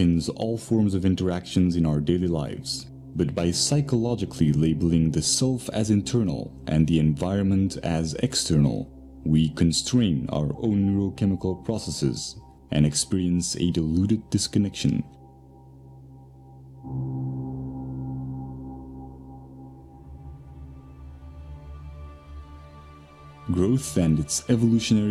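No technical faults are audible.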